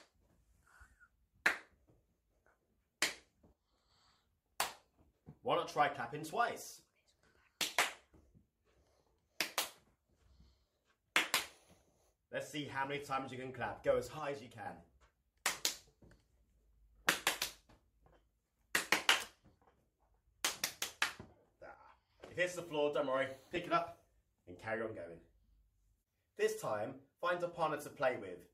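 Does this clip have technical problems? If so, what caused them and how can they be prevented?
Yes. At 3.53–3.90 s, 14.19–14.66 s and 21.74–22.10 s the level drops abruptly by about 6 dB and then returns, each time for roughly 0.4 s. This points to one channel dropping out, likely from a loose connection or a momentary link fault on one side. When the sound is summed to mono, content shared by both channels halves in level, and anything carried only by the missing side vanishes. A fade or gain change would not do this. It would be gradual and would keep the same content. Secure the cabling and monitor both channels separately during capture.

Two very short glitches at 21.47 s and 23.56 s are lost LE Audio frames. Each gap lasts 10 ms, which fits a single lost LC3 frame. The decoder fills the hole by repeating the previous spectrum with scrambled phase, so you hear a brief noisy smear rather than a hard click or a true silence. 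That sets it apart from a digital dropout or a clipped sample. The light lossy compression underneath stays faint by comparison. Keep the Bluetooth link short and free of interference, or record over a wired path.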